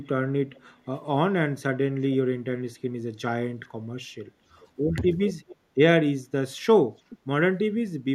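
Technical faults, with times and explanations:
0.00–0.05, 0.61–0.65, 2.89–2.98 and 4.24–6.32 s, speech suppressed in double talk: the sound briefly sinks, by about 5 dB at first and about 10 dB at 2.89 s. The long stretch loses up to about 25 dB over roughly a second. The likely cause is an echo canceller damping both sides while they overlap.
0.05–0.60, 4.61–4.67, 5.29–5.56 and 6.98–7.18 s, echo leak: a copy trails the sound by 0.42–0.43 s. It sits about 30 dB down, rising to about 15 dB down at 5.29 s. This likely comes from loudspeaker pickup that the far end's canceller failed to remove.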